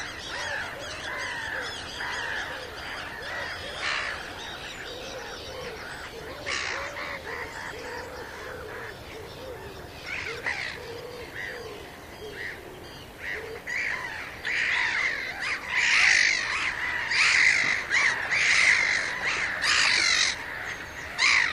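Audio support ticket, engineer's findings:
No audible defect found anywhere in the recording; nothing to trace to a component, ticket can be closed.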